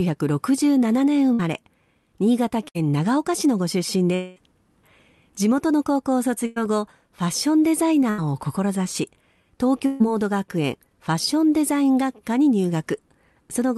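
Bursts of packet loss at 1.33–1.41 s and 2.69–2.77 s, each about 60 ms of missing audio, are bridged by a brief held buzz or fading hiss that continues the last sound before speech resumes further on, with that stretch skipped.

At 4.15–4.38 s, about 220 ms goes missing, likely a long network dropout. Unlike the short bursts, the concealment is stretched over the whole gap and decays noticeably, though it never reaches silence before the audio returns.

More bursts of packet loss follow at 6.46–6.58 s (100 ms), 8.10–8.20 s (80 ms) and 9.86–10.02 s (140 ms). Each is filled with the same decaying continuation.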